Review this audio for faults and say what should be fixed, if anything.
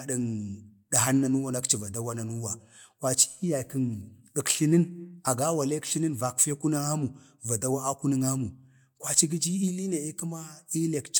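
Nothing in this speech clip needs fixing. No fault can be heard anywhere in it, so there is nothing to prevent.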